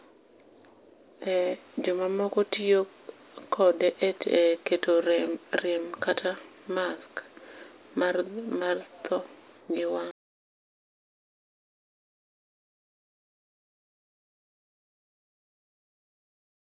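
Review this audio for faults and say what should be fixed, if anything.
Nothing to fix; no faults found anywhere in the speech recording.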